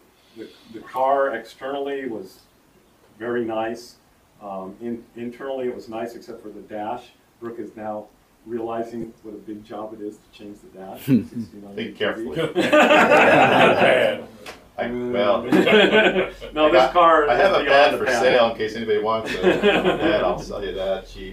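Three short dropouts sit in the audio, and they sound like lost LE Audio frames: at 9.01 to 9.04 s (about 22.5 ms), 15.70 to 15.72 s (15 ms) and 18.30 to 18.35 s (37.5 ms). The lengths fit runs of 7.5 ms frames, roughly three, two and five. When the Bluetooth LE Audio link drops frames, the LC3 decoder fills the gap by repeating the last spectrum with its signs randomised, which turns the missing stretch into a brief noisy smear, and it fades that fill after the first few frames. The lossy coding itself is light, with no more than a watery edge on noise and attacks.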